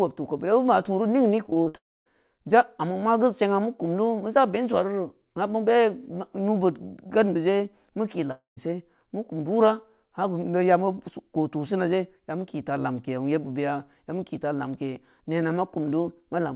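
From 1.46 to 1.76 s the speech turns choppy and robotic: repeated packet loss leaves five short holes, the longest 56 ms, each patched by stretching the last sound, so nearly half of that span is artificial fill rather than real audio.

Straight after, from 1.76 to 2.08 s, comes one unbroken gap of about 300 ms, likely a long network dropout: a brief fading buzz, then roughly 250 ms of silence. Unlike the stuttering burst before it, this is a single hole. The same happens at 8.32 to 8.59 s, with about 150 ms of silence. Both are heard through a telephone-band G.711 path with nothing above 4 kHz.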